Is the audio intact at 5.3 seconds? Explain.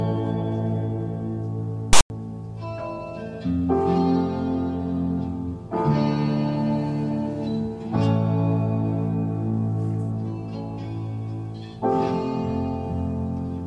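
Yes, at 5.3 seconds the audio plays through cleanly, with no dropout, click, distortion or other break in the sound.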